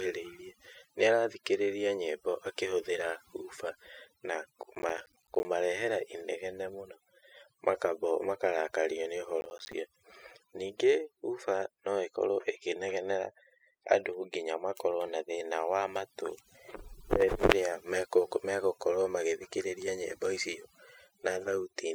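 From start to finish, the speech carries overdone noise removal. The suppressor has pushed individual frequency bands down wherever they came close to its noise estimate, so the background collapses to near silence dotted with twinkling specks, and the softer parts of the voice are carved away with it. Unlike a plain low-pass or band-limited sound, the damage keeps changing from moment to moment as bands flicker in and out.

At 4.63 s, right after "nyĩmbo akĩhũthĩra hoofer na", a burst of processor overload crackle runs until 5.45 s. A second burst follows at 9.41 s, after "makarakario nĩ", and lasts until 9.73 s. In each, the processor kept missing its deadlines, and each missed buffer became a hard-edged gap of silence. The tear rate points to buffers of around 10 ms, about 20 of them missed in the first burst and about 15 in the second. A single dropout is one clean hole, but here many tiny holes pile into a gritty tearing that stops once the load eases.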